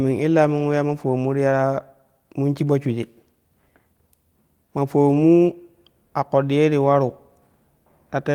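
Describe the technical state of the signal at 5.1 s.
At 5.1 s there is a lost packet rebuilt from error correction, running from 5.09 to 5.19 s. The following packets carried low-bitrate spare copies of the missing audio, and the decoder played those copies instead, which fits about three lost packets. The sound never drops out. It turns briefly rougher and noisier, then returns to normal. Concealment with no spare copy would instead smear or repeat the preceding sound, sounding buzzy or metallic.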